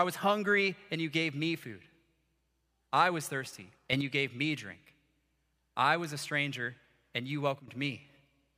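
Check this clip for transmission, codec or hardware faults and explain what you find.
Two kinds of fault turn up in the speech, one of them twice.

A sudden gain jump occurs between 3.93 and 4.01 s, right after "I was thirsty" and before "you gave me drink": level rises about 6 dB at once. A second jump follows "a stranger and you" at 7.60 to 7.68 s, dropping about 12 dB. Voice and background noise shift together, most likely from gain applied instantly without a ramp.

An electrical switching spike snaps at 6.04 s, just before "a stranger and you". It is a sharp snap laid over the speech, likely a nearby switch or discharge arcing briefly and coupling into the audio line.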